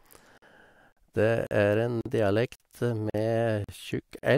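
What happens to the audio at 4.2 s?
From 4.19 to 4.23 s there is a gap between chunks: a 44 ms stretch of silence inserted where two half-second chunks join. No speech is lost, but it stops abruptly and resumes late. The waveform drops to a flat line, and the spectrogram shows a blank vertical band with hard edges.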